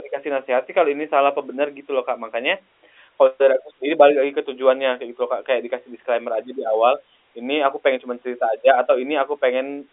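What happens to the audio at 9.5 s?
At 9.5 s the speech is intact, carrying only the narrow telephone band of G.711 coding with nothing audible above roughly 3.7 kHz.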